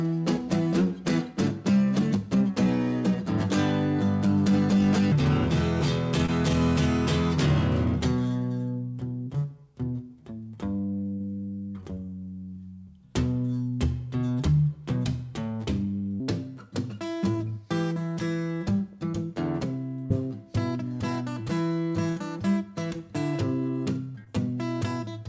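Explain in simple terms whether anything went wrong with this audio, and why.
From 5.1 to 16.2 s there is a section at the wrong speed. It plays at about three quarters of its proper speed, so everything sounds slower and roughly five semitones lower, likely from being played against the wrong clock. Because pitch and pace drop together for the whole eleven seconds, it is a steady slowdown, not a brief glitch.

There is short concealed packet loss at 6.26, 11.94, 17.32 and 24.24 s, each gap about 20 ms, and from 20.06 to 20.12 s, about 40 ms. Small pieces of the call arrived too late, and the receiver patched each hole by stretching the last sound. The result is a tiny smear or wobble, and a short sound can disappear.

A burst of packet loss hits from 11.14 to 11.22 s and from 22.10 to 22.18 s, with about 60 ms missing each time. The receiver couldn't patch that much convincingly. The last sound turns into a brief held buzz or fading hiss before the audio jumps ahead, which is longer than the tiny wobbles.

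The call itself went through a G.722 codec, which removes everything above 8 kHz, so the sound is a little dull at the top.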